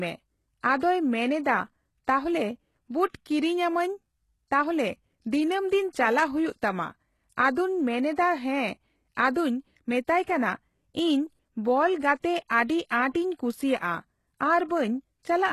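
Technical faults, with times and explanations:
Throughout, HE-AAC compression: the speech has plainly audible codec damage, with nothing above 12.3 kHz and a treble that sounds rebuilt rather than captured, gritty on s sounds where copied harmonics fail to line up, which fits a low-bitrate setting around 16 kbps; spectral band replication is the likely cause.
0.78 to 0.82 s, pre-echo: a short hiss of about 39 ms runs ahead of a sharp attack, softening its onset, because the transform block spread quantisation noise sized for the loud attack back into the quiet moment before it.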